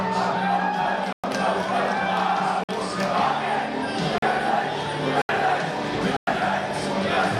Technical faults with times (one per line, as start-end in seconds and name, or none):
1.13-1.24 block of digital silence
2.64-2.69 block of digital silence
4.18-4.22 block of digital silence
5.22-5.29 block of digital silence
6.17-6.27 block of digital silence